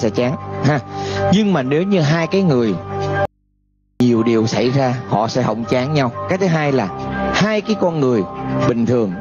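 The level breathes constantly, with a swing of around 20 dB, leaving the audio squashed and flat. That is gain pumping, likely from input gain set far too high and a fast limiter clamping down on every peak. From 3.25 to 4.00 s the sound cuts out abruptly for 0.75 s, leaving only mains hum about 45 dB below the signal. This is an audio dropout to a faint residue, likely the signal lost while the path after the break stayed live and picked up hum from the open input.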